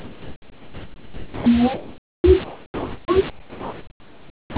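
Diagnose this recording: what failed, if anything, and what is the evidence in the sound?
Speech gives way to steady, flat noise at 0.0 to 1.46 s, 1.74 to 2.24 s, 2.44 to 3.08 s and 3.3 to 4.56 s. The stage is call processing. The likely cause is sound dropped by the voice detector. The sender treated speech as background and stopped sending. The receiver played comfort noise in its place.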